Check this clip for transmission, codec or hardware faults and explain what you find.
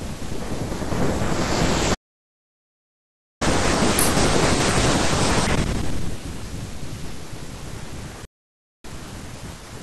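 Three faults show up in this speech clip: a playback stall, a sped-up catch-up right after it, and a later dropout to silence.

From 1.94 s to 3.42 s there is a playback stall. The player most likely ran short of buffered data or had its output thread held up, so it had nothing to send to the output for about 1.46 s. The speech halts in mid-flow and the output goes silent for that stretch. When sound returns at 3.42 s, it resumes from the point where it stopped.

From 3.42 s to 6.42 s the player catches up at higher speed. To win back the time lost in the stall, it resamples its backlog and runs it at 1.15 times normal speed. Because resampling changes speed and pitch together, the speech sounds hurried and pitched up by about two semitones for those three seconds. It then drops back to its normal rate and pitch.

From 8.25 s to 8.84 s there is an audio dropout to silence. The input signal was likely lost while the recording chain kept writing silence. 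For about 0.59 s the speech cuts out abruptly and the gap is silent, with no room tone. The speech then comes back in mid-flow. Whatever was said during that gap is not recoverable from the clip.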